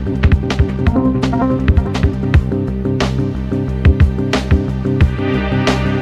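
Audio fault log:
0.00–2.26 s, time-stretched section: software likely squeezed this opening to fit a shorter length, running it 1.85 times faster and dropping short pieces to hold pitch. That portion sounds rushed at unchanged pitch, and the pace slows abruptly at 2.26 s.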